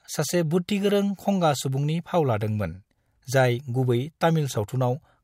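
No technical faults can be heard anywhere in the recording. There is nothing in the speech that needs a timestamp or further comment.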